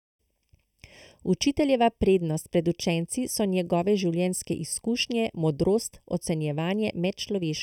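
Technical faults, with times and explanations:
Throughout: channel delay (comb filtering). One side of the speech is running a fraction of a millisecond behind the other, and when the two get folded to mono the shared parts cancel at regularly spaced frequencies. The first deep notch sits somewhere around 1.5 kHz, with more repeating up the spectrum, so the speech comes across hollow and a bit phasey, like it's being heard through a tube.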